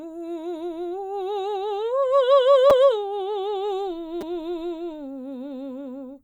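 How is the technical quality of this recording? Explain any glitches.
The music has two brief playback glitches, both repeated buffers. At 2.7 s and again at 4.21 s a tiny fragment of the music plays over and over with hard joins, heard as a quick click or buzzy tick. New audio arrived late, so the player reused its last chunk, which fits a 5 ms buffer. It sounds twice more at 2.7 s and three times more at 4.21 s, displacing roughly 10 ms and 15 ms of music.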